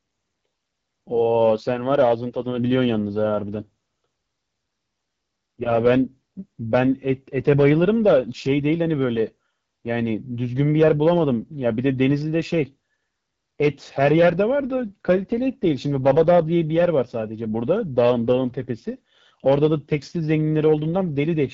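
AMR wideband (HD Voice) codec damage runs throughout this speech clip. Detail up to 6.4 kHz comes from a pulse-excited vocal tract model, and the band from 6.4 to 7 kHz is just shaped noise. The damage is plainly audible, a rough, raspy texture that fits the 8.85 kbit/s rate, one of the two lowest.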